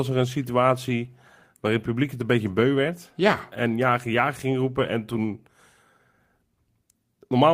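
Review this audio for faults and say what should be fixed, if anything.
Nothing here needs fixing; no faults turned up anywhere in this recording, so it can stay as it is.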